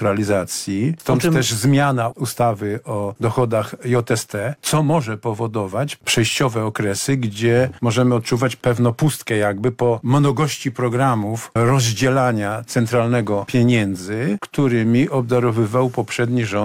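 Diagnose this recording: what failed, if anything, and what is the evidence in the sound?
Nothing failed; no faults heard.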